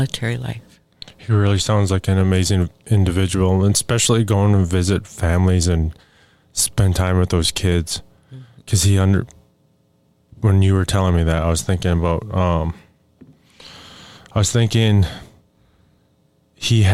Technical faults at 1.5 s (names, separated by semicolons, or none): none